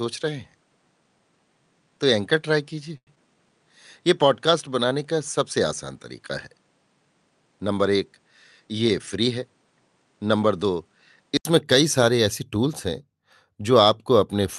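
Speech heard through a call path whose input was likely a poorer device until 11.45 s, when an input switch to a better one occurs. Up to that point nothing reaches above 10.4 kHz and there is an added noise floor about 40 dB under the voice, so the sound is duller and boxier. At the switch an 80 ms silence opens, the top end returns and the level stays about the same. A short stall from a late packet comes at 2.97 to 3.09 s. The jitter buffer ran dry, and the receiver stretched the last sound by 95 ms until the packet arrived, so nothing is lost but a sound hangs on too long with a slight buzz or dip. Right after, at 3.15 to 3.18 s, comes a short concealed packet loss. About 40 ms of audio never arrived, and the receiver continued the preceding sound briefly before blending back, leaving a brief smear or wobble. From 8.44 to 9.38 s a jitter buffer speed-up trims the backlog. Pitch-period-sized slices totalling about a tenth of a second are cut repeatedly, so the voice runs at 109% speed with unchanged pitch and sounds hurried.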